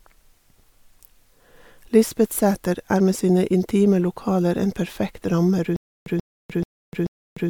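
A likely playback stall from 5.76 s to the end causes stutter with silent gaps: a 135 ms fragment of speech repeats four times, each followed by about 300 ms of silence.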